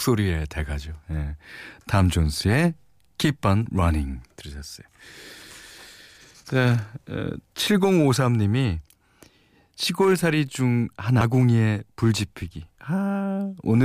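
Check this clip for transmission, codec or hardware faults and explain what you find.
There is one fault, a CD skip, at 11.21 s. A knock or a disc flaw made the laser jump to another turn of the spiral. Playback mutes for a few milliseconds, heard as a brief tick. The speech then resumes from a different place.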